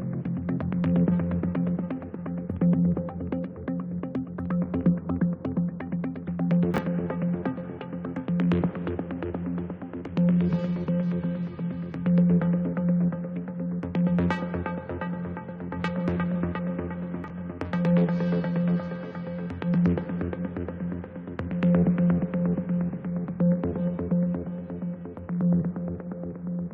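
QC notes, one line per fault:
6.74 to 6.78 s, chunks out of order: a 20 ms chunk of the sound turns up one slot late, so it plays after the chunk that should follow it. Nothing goes missing, but the sequence is shuffled and there are three hard joins, giving a brief jumbled blip.
17.24 to 17.30 s, chunks out of order again: this time the 20 ms chunk lands two slots late, so the scrambled stretch runs a little longer before things line back up.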